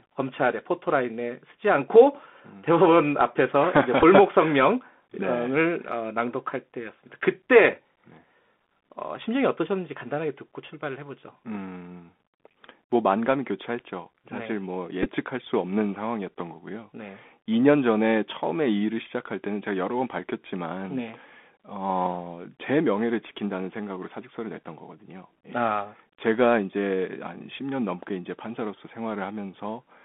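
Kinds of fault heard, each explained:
Bluetooth CVSD headset codec: The headset link carries the speech through a one-bit delta modulator, consistent with a 64 kbps stream, that confines it to roughly 200 Hz to 3.5 kHz. The speech sounds plainly narrow, with scratchy, overdriven sibilants and a granular hiss underneath.
Bluetooth headset packet repeated: At 4.00 s and 15.03 s, lost headset packets were filled by decoding the previous packet's bits again, about 15 ms and 18.8 ms in total, spread over roughly 30 ms. Each event is heard as a brief rough, buzzy flutter.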